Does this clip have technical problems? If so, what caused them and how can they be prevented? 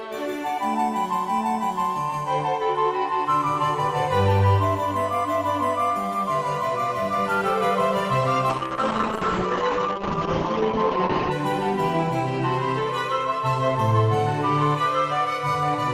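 Yes. From 8.51 s to 11.37 s the sound turns rough and muffled, losing its top end above 8 kHz and holding at its dullest for about 2.8 s before brightness returns. This is a call bitrate drop: the bandwidth estimate fell, so the encoder coded far more coarsely and cut the audio bandwidth. The change suggests a fall from around 40 kbps to about 8 kbps. A steadier network connection, with less competing traffic, helps prevent it.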